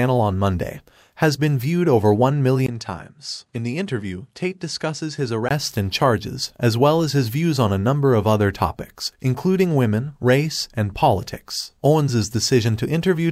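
A speech recording in which, from 2.66 to 5.51 s, the input was likely switched to a poorer device: a brief 20 ms gap, then, from "and charges as well", nothing above 11.4 kHz, a faint new noise floor, and a level a few dB lower, before full band returns.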